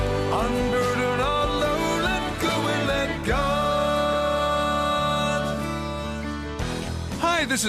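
Nothing in the signal points to a technical fault at any moment.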